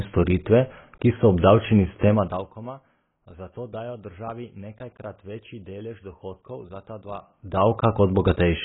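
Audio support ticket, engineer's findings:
Dull, smeared speech throughout, nothing above 3.8 kHz; likely AAC compression at a low bitrate, AAC-LC fitting about 16 kbps. Encoder quantised coarsely, lowering the cut-off and leaving heavy codec damage.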